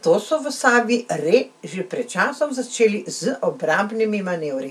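Nothing to flag: no audible technical faults anywhere in the speech recording.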